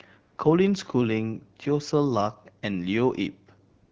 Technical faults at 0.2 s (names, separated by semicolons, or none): AMR comfort noise